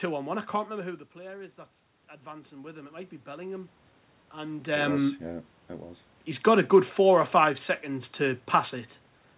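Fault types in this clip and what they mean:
Automatic gain rising: after the input dropped by about 13 dB, the gain control pushed its level up by about 6 dB over roughly 1.6 s, from 2.22 to 3.79 s. The room noise swells along with the voice, unlike a talker simply moving closer.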